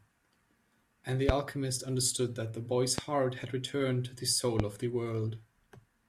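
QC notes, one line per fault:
1.29–1.32 s, 2.98–3.01 s and 4.60–4.62 s, loud pop: a brief voltage spike, likely from a switch, plug contact or static discharge, enters the signal path three times. Each is a single sharp pop lasting about 25 ms and peaking around 20 dB above the speech, which continues underneath.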